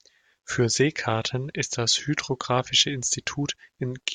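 No technical faults are audible in this speech recording.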